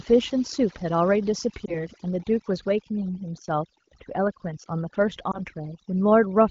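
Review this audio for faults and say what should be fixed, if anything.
Overdone noise removal runs through the whole speech clip. The background drops, with twinkling specks where isolated frequency bands flicker on and off. The suppressor was set too hard. It pulls down any band close to its noise estimate, and the quieter parts of the voice are cut along with the noise. To prevent it, use a gentler reduction setting and leave a little natural noise floor in place.

Lost AMR speech frames cause two short glitches, at 1.66 to 1.77 s and 5.31 to 5.41 s. Each one is a brief dip and warble of roughly a tenth of a second. That fits a single missing 20 ms frame. The wideband AMR decoder covers the gap by reusing the last good pitch and vocal tract settings at falling gain, and the repair spreads over the following frames. The codec itself shows only light coding colour, which fits a mid-rate HD Voice setting. 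To prevent it, improve the radio link so fewer frames fail their checksum.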